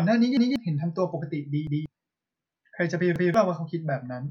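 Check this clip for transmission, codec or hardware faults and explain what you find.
Three stutters: a repeated buffer at 0.37–0.56 s, 1.67–1.86 s and 3.16–3.34 s. Each time, late data made the device replay a 186 ms chunk once, which fits an 8192-sample buffer. You hear a hard-joined echo, and about 0.2 s of speech goes missing.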